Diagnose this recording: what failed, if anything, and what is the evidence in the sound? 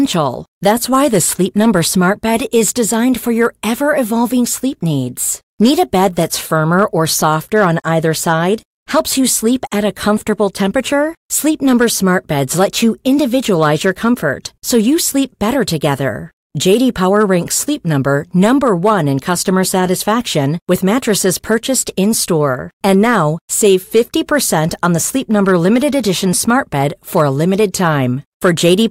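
Hard clipping runs through the whole speech recording: the level was pushed about 3 dB past what a converter or fixed-point stage could hold, so the tallest peaks, roughly half a percent of samples, were sliced flat, adding high harmonics heard as brief crackle on louder syllables.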